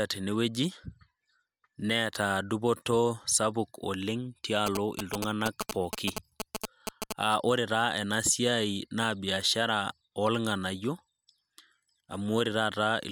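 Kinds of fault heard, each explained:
GSM signalling bursts: A nearby 2G phone is exchanging short radio bursts with the network, and the audio circuit rectifies them into sound. From 4.67 to 7.13 s, a galloping dit-dit-dit of brief buzzes at about 217 Hz runs over the speech. It is roughly as loud as the speech.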